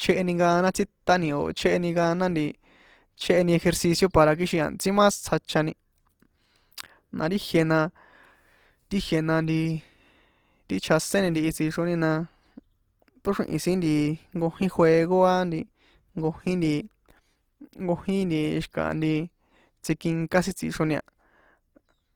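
Opus compression, throughout: starved bands are refilled with folded content or noise, making the speech plainly grainy and rough, likely from CELT coding near 24 kbps.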